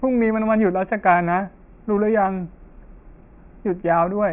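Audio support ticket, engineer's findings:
No audible technical faults found on the speech signal; level, timing and continuity all hold steady throughout.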